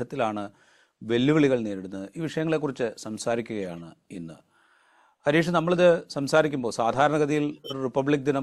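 From 7.51 to 7.73 s the speech is broken by a short stretch of misplaced sound, a chirp, squeak, blip, noise burst or brief gap. This is a corrupt frame decoded: damaged bits in around four compressed frames were played anyway, putting energy at wrong frequencies.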